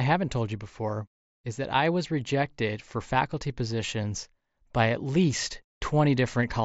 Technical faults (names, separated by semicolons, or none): concealed Bluetooth headset packet loss